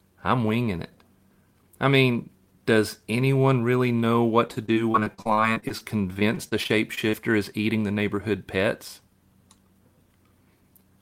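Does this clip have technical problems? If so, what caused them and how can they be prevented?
Yes. There's repeated packet loss (robotic sound) from 4.47 to 7.15 s, between "anyone really know what" and "is eating the neighborhood". Around two dozen short dropouts, none longer than 42 ms, get papered over by stretching the previous sound, so roughly a fifth of that stretch turns choppy. A steadier network path or a bigger jitter buffer would keep this from happening.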